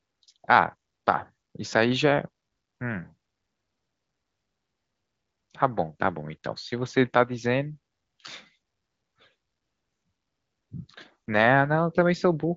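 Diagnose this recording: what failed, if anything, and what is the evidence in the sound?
Nothing stood out on listening to this speech recording, which carries the band-limited sound of an AMR wideband (HD Voice) path with no content above about 7.6 kHz.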